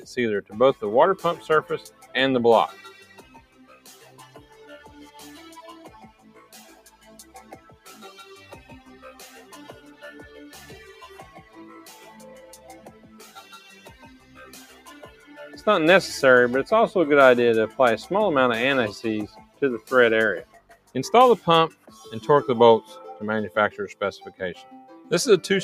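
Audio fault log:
throughout: noise suppressor applied to music or sounds. A suppressor built for speech stays active on this audio. It treats sustained tones, ambience and decay as noise and pulls them down. Level swings by roughly 15 dB, so the sound pumps and thins while attacks pass.
1.89–2.11 s, 3.03–4.59 s, 6.11–7.87 s, 12.86–15.27 s, 19.45–19.61 s, 20.45–20.95 s, 21.74–21.90 s: sound cut by the noise suppressor. Here the suppressor mistakes the sound for noise and ducks it harder. Drops reach about 7 to 11 dB. Held or fading parts sink, and tails end early.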